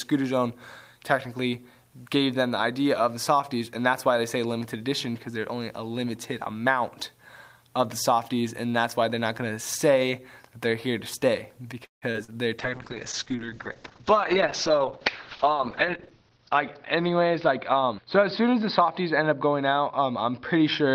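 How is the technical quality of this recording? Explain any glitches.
The recording has clear network glitches packed around the 12-second mark, followed by a lasting loss of quality.

From 11.85 to 12.04 s the sound stops: a brief continuation of the last sound fades into about 140 ms of silence. This is likely a call audio freeze, with packets held up until the jitter buffer emptied. Playback then resumes where it left off, so a pause of about 164 ms has been added.

Right after, at 12.12 to 12.16 s and 12.24 to 12.30 s, there are two quick smears. These are short concealed packet loss: 20 ms and then 40 ms of audio never arrived, and the decoder papered over each hole by extending the preceding sound before blending back in.

From 12.6 s to the end the audio turns muffled and rough. This is a call bitrate drop, where the encoder was throttled from 32 to 7 kbps and the bandwidth narrowed from 20 kHz to 6 kHz, with the lowest rate holding for about 3.5 s.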